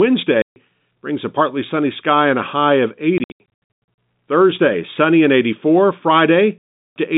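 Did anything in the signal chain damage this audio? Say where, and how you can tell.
Yes. The speech cuts to dead silence with hard edges at 0.42–0.56 s before "brings a partly sunny", in scattered gaps of up to 100 ms from 3.18 s after "and a high of", and at 6.58–6.96 s. This is network packet loss filled with silence, with gaps that fit 20 ms packets.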